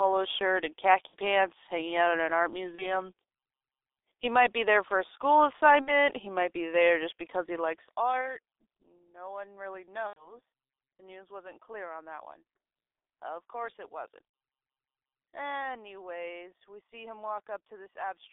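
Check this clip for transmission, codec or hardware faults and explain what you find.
Two faults are present: heavy G.723.1 codec damage throughout the speech, and six bursts of VoIP packet loss concealed by the speech codec.

The G.723.1 codec colours the whole clip. The sound is band-limited to roughly 300 Hz to 3.6 kHz, which fits a telephone line and a low-rate mode near 6 kbit/s. Because the coder rebuilds each 30 ms frame from a coarse, slowly updated voice model, the speech is muffled and hoarse, with smeared consonants. On a spectrogram, everything above 3.6 kHz is empty and the harmonics look blocky and blurred.

VoIP packet loss concealed by the speech codec occurs at 1.07 to 1.16 s, 2.75 to 3.00 s after "out in an art", 5.81 to 5.96 s between "there for a school" and "he might be there", 8.21 to 8.25 s, 10.07 to 10.34 s, and 14.27 to 14.33 s after "course it wasn't". About 30 to 90 ms of audio is missing each time, in 30 ms frame steps. 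The decoder fills each gap by repeating its last pitch and filter at falling gain, so the speech stretches into a fading buzz or coloured noise. On a spectrogram, this shows as frozen, flattened harmonics. On the waveform, it appears as a decaying, repetitive stretch that stays weak for a short time afterwards.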